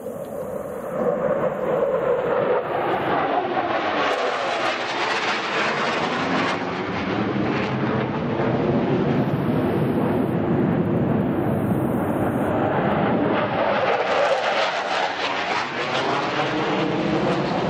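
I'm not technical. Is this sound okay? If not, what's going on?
Yes, the sound is technically in good shape, with nothing broken or damaged anywhere in the recording.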